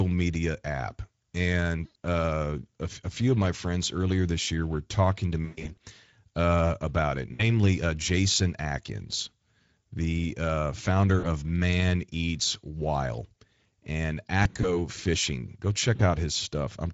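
Throughout, the speech runs through the Speex codec. Its low-bitrate CELP coding, which fits a mode around 17 kbps, leaves too few bits for the excitation, so the speech sounds plainly hoarse and noisy.

VoIP packet loss concealed by the speech codec occurs at 1.85–1.97 s; at 5.45–5.79 s, between "year were talking to" and "uh about it", as scattered losses with the longest gap about 120 ms; at 7.33–7.46 s, after "uh about it"; at 11.19–11.25 s, after "the uh founder"; at 14.43–14.74 s, again scattered; and at 15.95–16.02 s. Each time, the decoder fills the gap by extending its last pitch and filter at falling gain. The speech smears into a buzzy tone or coloured noise that fades, and stays weak and distorted briefly after the packets return.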